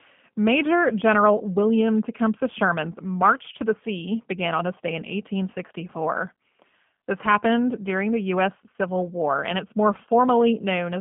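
From start to finish the speech passes through a G.729 codec at 8 kbit/s. Nothing above 3.4 kHz survives, and the rebuilt voice sounds plainly rough and synthetic.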